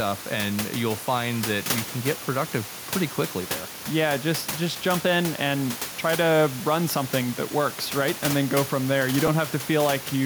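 At 9.27 s there is a brief dropout from lost LE Audio frames, about 10 ms long, which fits a single missing LC3 frame over the Bluetooth link. The decoder filled the gap by repeating the previous frame's spectrum with randomised phase signs, so the moment sounds like a tiny rough, noisy blur. On a spectrogram it shows as a thin vertical smear where harmonic lines lose definition; the waveform keeps its level but turns irregular. The room noise sits about 12 dB below the speech.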